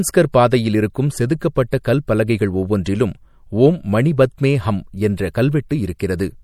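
Throughout, MP3 compression likely starved the speech of bits, in a way that fits about 64 kbps, so treble is cut off and s sounds turn watery.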